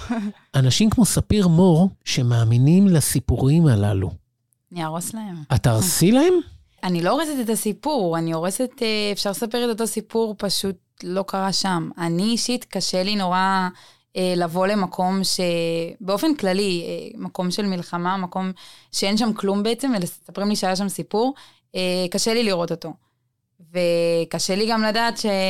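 Nothing in this recording stands out as a technical problem, so there's no fault to walk through here.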